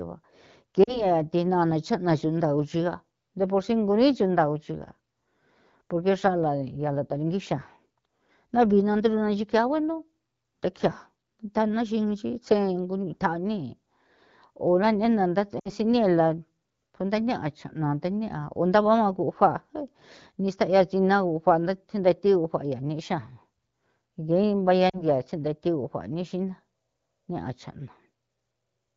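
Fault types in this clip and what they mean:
Lost AMR speech frames: corrupted frames were concealed by repeating the last good settings at falling gain, causing brief 40 to 60 ms dips toward near silence.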